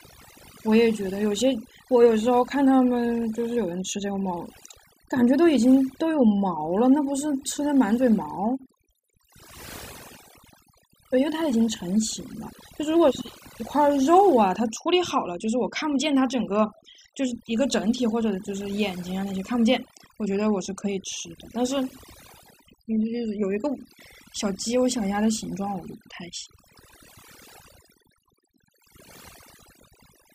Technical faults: overdone noise removal

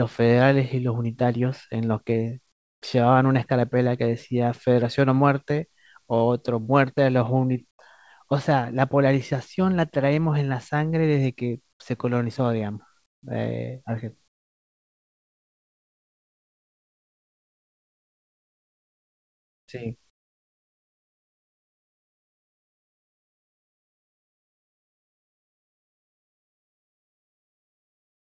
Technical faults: comfort noise in place of the background

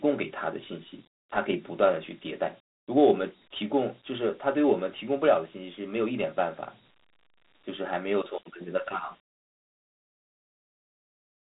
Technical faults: Dialogic VOX ADPCM

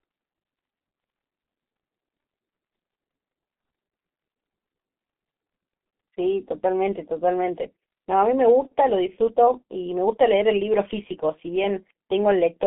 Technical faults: G.723.1 codec

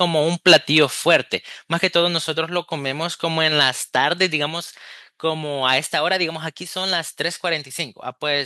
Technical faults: microphone overload; microphone volume stepped down

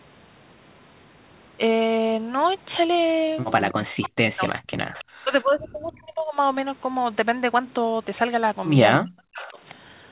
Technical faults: speech suppressed in double talk; echo leak

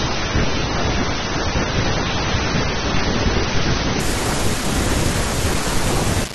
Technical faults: adaptive stream starting at a low bitrate

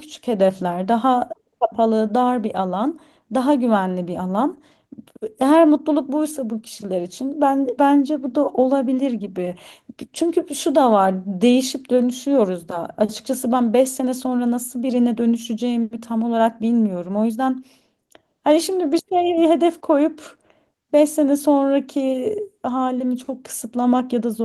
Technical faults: dropped samples

